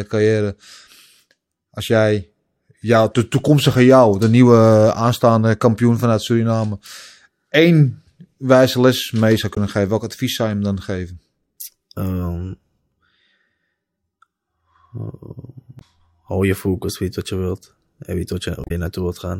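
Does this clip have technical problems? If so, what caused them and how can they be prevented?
Yes, there's damaged data in a compressed stream: brief glitches in the speech at 9.52–9.58 s, 15.78–15.82 s and 18.63–18.71 s, where corrupted bytes throw the decoder off sync until it finds the next frame. Checksummed storage and transfer would prevent it.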